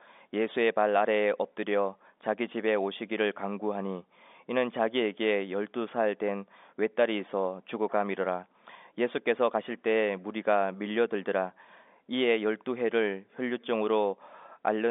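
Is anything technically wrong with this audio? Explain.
No, nothing is technically wrong: the speech arrives over what sounds like an ordinary G.711 telephone line, with the expected narrow band of roughly 250 Hz to 3.6 kHz and nothing above about 3.7 kHz, and no fault can be heard anywhere in it.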